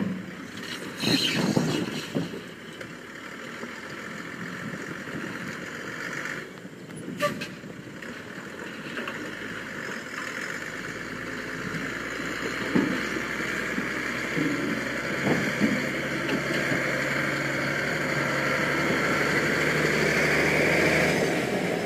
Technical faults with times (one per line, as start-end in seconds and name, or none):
0.00-21.86 sample clock jitter